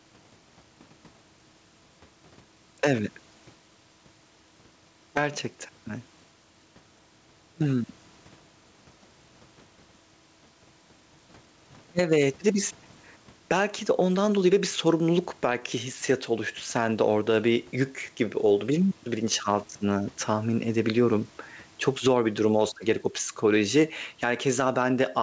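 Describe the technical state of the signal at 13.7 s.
At 13.7 s you're hearing gain pumping, which runs through the whole clip: the gain swings by around 10 dB, leaving everything squashed. The likely cause is gain set too hot, with a fast limiter clamping down.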